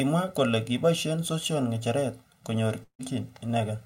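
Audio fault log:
throughout: channel delay (comb filtering). The speech sounds hollow and phasey, with fixed notches starting around 300 Hz and repeating evenly up the spectrum. One channel runs roughly a millisecond and a half behind the other, so the mono sum cancels at those frequencies.
2.83–3.02 s: long network dropout. Just after "kiboishe sosion ngecheret konyor", the last sound is stretched into a fading buzz for about 0.15 s and then goes silent. Speech resumes with about 120 ms missing, likely because packets stopped arriving and playback timing shifted by a few tens of milliseconds.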